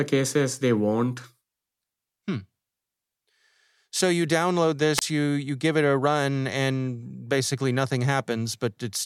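At 4.96 s, a wireless microphone squelch dropout: weakening radio signal brings a burst of hiss, then the receiver mutes for 26 ms, a flat waveform gap before 5.02 s.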